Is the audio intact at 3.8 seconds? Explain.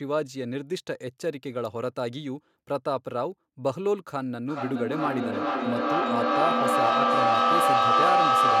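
Yes, the speech at 3.8 seconds plays through intact, with no dropout, click, distortion or other break at that point.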